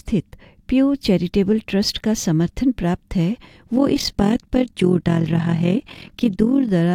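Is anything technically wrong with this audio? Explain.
Yes, there's an overlap-add ripple from about 3.76 s to 6.69 s. Somewhere in the chain the audio was split into windowed frames and stitched back together with an overlap that doesn't add up to a steady gain. So the level dips and swells once per frame, by about 11 dB, around 40 times a second. You hear it as a fast, rough flutter, a kind of tremolo riding on the sound until near the end.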